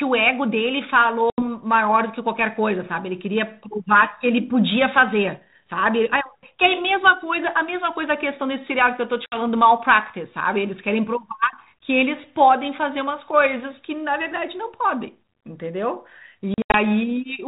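At 1.3 to 1.43 s, 9.26 to 9.37 s and 16.54 to 16.75 s, the speech drops out in packet loss on an ADPCM call. About 80 ms, 60 ms, then 140 ms scattered over 200 ms are replaced by silence. The decoder's predictor and step size lose track of the sender's, so speech resumes briefly and slightly distorted. On a spectrogram, these show as hard-edged blank columns. The band stays under 4 kHz, fitting 32 kbit/s G.726.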